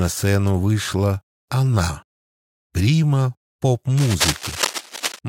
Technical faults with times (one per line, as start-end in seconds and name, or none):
3.97-5.19 cable scratch noise